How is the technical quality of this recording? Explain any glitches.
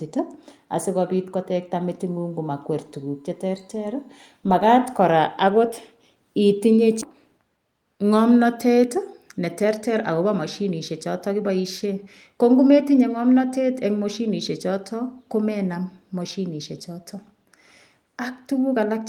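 The recording has three distinct glitches: a faint electrical tone early on, an abrupt jump in the speech, and a stretch where the speech runs fast.

From 2.07 to 4.16 s there is USB whine, a steady tone at exactly 1 kHz, sitting around 45 dB below the speech. The bus draws current in 1 ms frames, and that periodic load leaks into the audio through shared power or ground, giving a 1 kHz tone. Unlike mains hum, it sits far above 50 or 60 Hz, and its pitch never drifts.

At 7.01 to 7.03 s the speech skips ahead. Roughly 0.7 s of audio is gone, and the two sides are butted together with no silence or filler between them. This happens when a chunk is dropped, either in transit or by an overflowing jitter buffer, while later audio is already queued, so playback simply resumes further on. What separates it from a dropout is that there is no gap or concealment noise. The sound just lurches forward.

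From 8.77 to 12.34 s a jitter buffer speed-up makes the speech play about 8% fast at unchanged pitch. In total, something like a third of a second is trimmed away. The receiver had built up more buffered audio than it wanted, and it cut the delay by repeatedly removing short pitch-period-sized slices. The result sounds hurried rather than chipmunk-like. That distinguishes it from a sample-rate mismatch, which would raise the pitch along with the speed.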